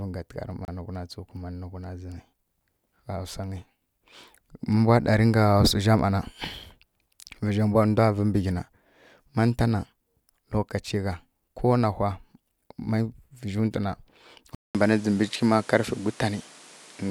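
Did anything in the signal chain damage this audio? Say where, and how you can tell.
Yes. At 0.65 to 0.68 s the sound cuts to silence for 30 ms and then resumes. This is likely a Bluetooth stall in the wireless playback link: the receiving buffer ran dry while delayed packets were resent. A storage or file dropout would not resume cleanly like this.

At 14.55 s there is a 200 ms silence, and then the audio stays changed to the end. Nothing remains above 12 kHz, the level shifts by about 5 dB, and a new noise floor sits roughly 30 dB below the signal. This is likely the input switching to a poorer device at the capture stage. A codec bandwidth drop would narrow the band without the gap or the different level and noise.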